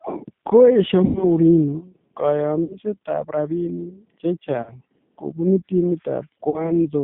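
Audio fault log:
Throughout, G.729 codec: the speech sounds narrow, slightly rough and synthetic, confined to roughly 150 Hz to 3.5 kHz with plainly audible coding damage. An 8 kbit/s coder rebuilds each 10 ms frame from a vocal tract filter, a pitch predictor and a few pulses.
1.05–1.27 s, 2.64–2.78 s, 4.62–4.73 s, 6.50–6.78 s, VoIP packet loss concealed by the speech codec: the speech smears into a buzzy, fading tone, then recovers weakly. About 100, 60, 40 and 40 ms of audio went missing, and the decoder extrapolated from its last frame.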